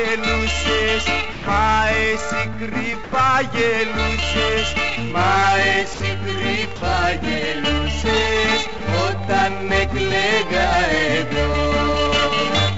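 At 1.32 to 1.46 s (140 ms), 3.04 to 3.12 s (80 ms), 5.94 to 6.00 s, 6.76 to 6.82 s (60 ms each) and 8.78 to 8.80 s (20 ms), the audio briefly gives way to a flat, steady hiss before resuming. This is likely sound dropped by the voice detector: the sender judged those moments to be background, stopped transmitting, and the receiver filled the gaps with comfort noise. Across the clip the band stops at 7 kHz, which fits a G.722 call path at 64 kbps.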